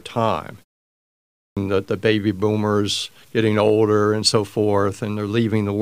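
From the first moment to the end, the speech carries a grainy, signal-following distortion that points to low bit depth without dither. The grit sits around 40 dB below the speech and thickens as syllables decay. The likely cause is truncation to about 9 bits. On a waveform, quiet stretches look like coarse staircases, and a spectrogram shows a noise haze that rises and falls with the speech rather than a steady floor.

At 1.06 s, after a 0.5 s pause, the next phrase has a clipped start after a pause. The device needed time to wake, and about 0.51 s of sound is lost, up to 1.57 s. The speech bursts in abruptly, without its opening sounds. The waveform jumps from flat silence straight into the speech, and the spectrogram shows a hard vertical edge with no onset energy before it.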